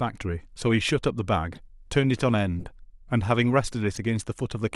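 At 1.53 to 1.58 s, 2.60 to 2.71 s and 3.95 to 3.98 s, a corrupt frame was decoded. Damaged bits were played as if valid, leaving brief chirpy noise bursts, around a couple, several and one frame long, peaking about -30, -25 and -20 dBFS. The stray energy, not silence or repetition, separates this from concealed loss.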